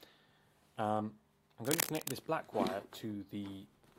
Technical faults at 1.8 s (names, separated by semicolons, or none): cable scratch noise